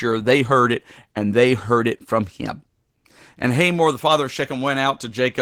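From start to finish the speech carries Opus voice compression damage, and it is plainly audible. The codec is working in hybrid mode: a SILK linear-prediction layer carries the band up to 8 kHz, with a CELT layer coding the fullband top end. The excitation is coarsely quantised, which points to a low bitrate of around 16 kbps. The result is a hoarse, slightly robotic voice.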